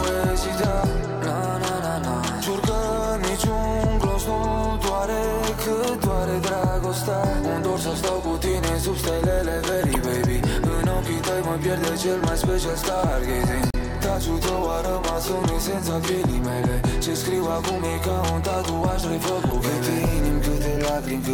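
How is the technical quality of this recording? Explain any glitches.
Three small glitches, all from damaged data in the compressed stream: at 9.92–9.96 s, 13.70–13.75 s and 19.50–19.53 s. Corrupted bytes make the decoder misread frames and hunt for the next good header, so each one comes out as a brief blip, with a tiny extra hiccup of about 6 ms at 13.7 s.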